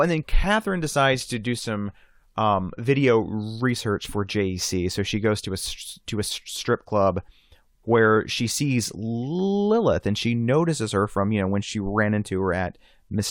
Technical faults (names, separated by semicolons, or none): none